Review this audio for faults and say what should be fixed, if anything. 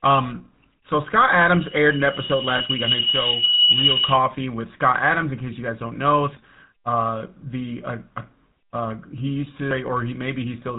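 The whole recording has the buzzy, gravelly grain of the GSM full-rate codec. Its pulse-driven vocal-tract model and the missing band above 4 kHz leave the speech rough, consistent with 13 kbps full-rate coding. Use a wideband codec or record the source before the phone network.

From 1.51 to 4.26 s there's a loudspeaker feedback squeal at 2.9 kHz. The mic-to-speaker loop runs away at that frequency, building over about a second and a half to roughly 10 dB above the speech. Lower the monitor gain, move the mic away from the speaker, or notch out 2.9 kHz.

Between 2.58 and 2.62 s there's a brief metallic ring where lost GSM frames were concealed by repeating the last good frame's settings. It sounds like a single dropped 20 ms frame. A cleaner radio link or better error protection would prevent it.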